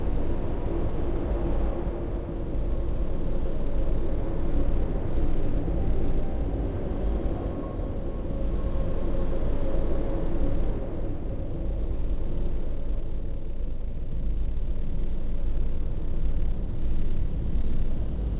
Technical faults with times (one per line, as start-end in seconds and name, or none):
none